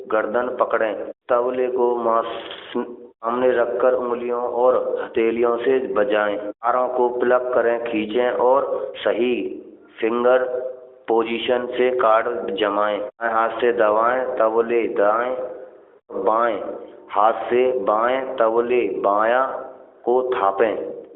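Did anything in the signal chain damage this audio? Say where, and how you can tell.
No, nothing damaged this audio.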